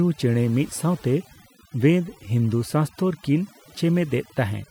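From start to finish the speech shows overdone noise removal: bands near the noise floor are pushed almost to nothing, taking quiet parts of the voice with them and leaving silent gaps sprinkled with chirpy specks. Unlike a gate, which mutes everything at once, this removes individual frequencies.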